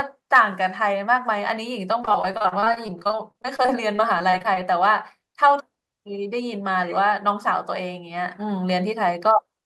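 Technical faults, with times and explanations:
2.01–4.58 s, repeated packet loss (robotic sound): nearly thirty short dropouts, none longer than 35 ms, each patched by stretching the preceding sound, with about 0.58 s concealed in all (close to a quarter of the stretch), leaving the speech choppy.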